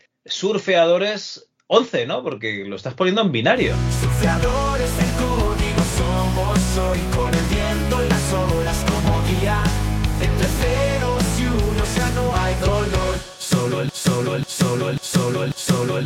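At 13.89 s the audio falls into a broken-record loop that runs to the end of the clip. A fragment of about 0.54 s plays back to back four times in a row, each pass identical. The likely cause is a stalled player, encoder or stream that kept re-sending the last buffered fragment, so whatever should have played after 13.89 s is lost.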